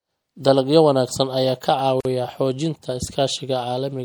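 A speech recording has likely been squeezed through MP3 encoding at too low a bitrate, the plainly audible damage fitting something around 64 kbps. Starved of bits, the encoder chops off the treble at a fixed point and drops weaker frequency lines that flicker in and out between frames, so the speech sounds dull and watery with a swirling texture, sibilants turn metallic and chirpy, and consonant onsets smear. Separately, the audio was encoded in pieces and joined without trimming the encoder's start-up delay and end padding. At 2.01 to 2.05 s a 46 ms gap opens in the continuous speech, its edges smeared by the codec so the silent part is shorter, before the sound resumes exactly where it broke off.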